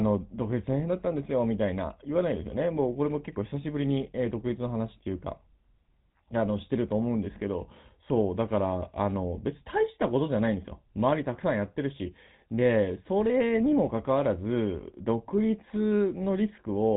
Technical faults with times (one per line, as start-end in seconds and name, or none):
0.00-16.96 GSM full-rate codec